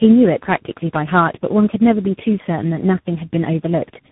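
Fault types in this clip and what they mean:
Tandem speech coding: sounds like three speech codecs in a row, each re-coding the last one's damage, so it's rough and warbly, nothing above 3.8 kHz.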